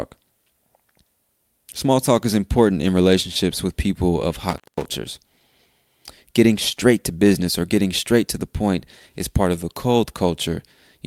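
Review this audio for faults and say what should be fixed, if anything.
There's an intermittent contact right after "relationships with people of", around 4.50 to 4.85 s. A loose cable or plug opens for about 200 ms, so the speech drops out with crackle on either side and faint hiss underneath. Worth re-seating and checking connectors before recording.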